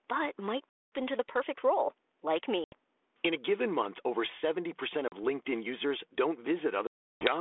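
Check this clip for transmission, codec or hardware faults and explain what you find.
One fault recurs four times in this speech clip.

Packet loss on an ADPCM call occurs at 0.69–0.92 s (230 ms), 2.64–2.74 s (80 ms), 5.08–5.13 s (40 ms) and 6.87–7.31 s (340 ms). Missing packets become hard-edged silent gaps. The decoder's adaptive predictor and step size then drift from the sender's, so the speech resumes with brief distortion that settles within tens of milliseconds.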